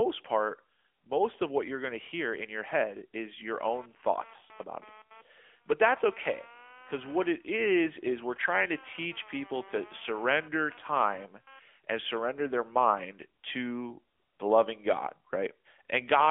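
AMR narrowband mobile codec damage runs through the whole recording. The speech has been squeezed into a mobile-phone channel: only the band from roughly 300 Hz to 3.4 kHz survives, and nothing at all passes above 3.6 kHz, so sibilants lose their hiss and the voice sounds boxed-in. The coder rebuilds each 20 ms frame from a vocal-tract model and a handful of excitation pulses. The plainly audible buzzy, synthetic edge fits a mid-rate mode of about 10 kbps.

Computer activity noise appears from 3.59 s to 11.59 s, starting after "in your head is" and dying away before "and surrender their mind". It is a buzzing chatter pulsing at around 200 times a second, sitting roughly 30 dB below the speech. It comes from the computer's changing processor or graphics load disturbing the ground shared with the audio circuit, which is why it starts and stops on its own schedule rather than following the voice.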